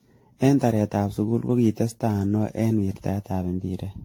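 From start to finish the speech sounds swirly, hollow and smeared, with blurred consonant attacks and nothing above 18.6 kHz. This is likely generation loss: repeated AAC-LC passes, around ten, pointing to 96 kbit/s, each requantising on shifted frames so holes accumulate.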